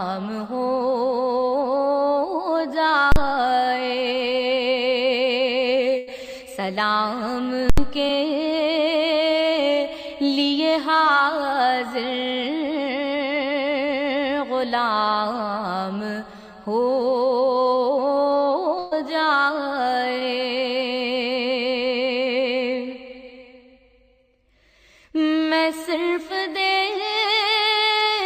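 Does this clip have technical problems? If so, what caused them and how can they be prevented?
Yes. Invalid numbers at full scale hit at 3.12–3.16 s (a 40 ms block) and 7.70–7.78 s (80 ms). A calculation produced infinite or invalid values that were forced to full scale, so the output jams at the rails. Unlike ordinary clipping, no sound passes through, only a harsh bang or pop pair. Prevent it by checking for and sanitising invalid values inside the processing chain before output.

A burst of packet loss occurs at 5.97–6.09 s, with about 100 ms missing, and at 18.79–18.93 s, with about 120 ms missing. The receiver stretched the last audio across each gap and faded it, and playback then resumed further on. Compared with the brief dropouts, these last long enough for the fade to be heard and for audio to be skipped. Prevent them with a larger jitter buffer, forward error correction or a more stable network path.

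Short concealed packet loss appears at 8.07–8.11 s and 20.19–20.23 s, each about 20 ms. The decoder bridged the hole by continuing the preceding sound and blending back, leaving only a quick smear or wobble. In-band redundancy or a slightly deeper jitter buffer would prevent these.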